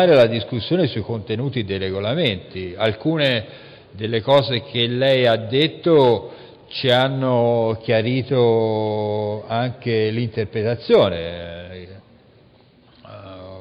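No faults are audible anywhere in the recording.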